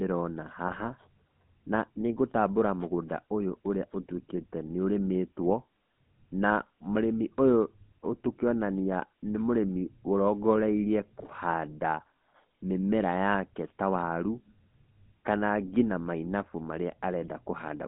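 The whole clip has that GSM full-rate codec grit: buzzy, gravelly speech squeezed into roughly 150 Hz to 3.6 kHz, which fits a 13 kbps full-rate stream. GSM bit errors hit at 0.68 to 0.83 s and again at 11.2 to 11.35 s, where corrupted filter, pitch and gain values make the speech squawk and gargle briefly.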